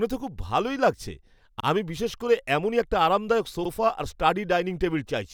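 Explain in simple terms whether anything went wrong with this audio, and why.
Twice the speech gives a tiny stutter, as if a sliver of sound is said twice: once at 1.60 to 1.65 seconds, right after "ভালো লাগছে", and again at 3.65 to 3.70 seconds, after "করে এমনই একটা আরামদায়ক". This is overlapping chunks. The audio was handled in 2-second pieces, and each new piece began 50 milliseconds before the previous one finished, so that short overlap plays twice at every join.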